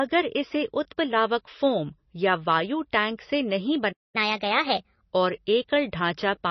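MP3 compression runs through the whole clip, and it is likely the cause of the heavy damage heard. Nothing remains above 5.9 kHz, and weak frequency detail flickers in and out between frames, giving the speech a watery, swirly quality with smeared onsets, consistent with a bitrate near 24 kbps.

A playback stall runs from 3.92 s to 4.16 s. The speech halts mid-flow into silence, likely because the player ran short of data or its thread was held up, and then resumes where it left off.

Catch-up at higher speed follows from 4.16 s to 5.03 s. The player resamples its backlog at 1.25 times normal speed, so the speech sounds hurried and raised by about four semitones before returning to normal pace and pitch.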